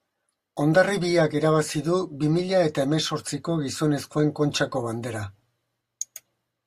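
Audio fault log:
throughout: resampler restarted on every block. Each 20 ms block is converted alone, leaving a small error at every edge. This gives a 50 Hz buzz, heard only while speech sounds and gone in pauses. Unlike scattered dropout clicks, its spacing never varies.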